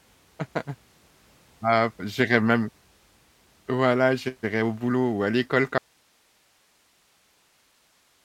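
Audio dropout to a faint residue at 5.78 s, just after "à l'école", in this speech clip: the signal cuts abruptly to hiss roughly 40 dB down until the end, likely a lost source feeding a still-live path.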